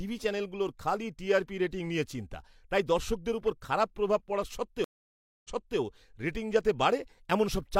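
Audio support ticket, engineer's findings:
Stream reconnect, 4.84 to 5.79 s. Speech cuts to silence for about 0.6 s, then resumes roughly 0.34 s earlier than the drop point, repeating material already heard. Probable component: network/stream client. Mechanism: connection lost, player reconnected, fresh decoder started mid-stream, server resent a buffered burst from before the break.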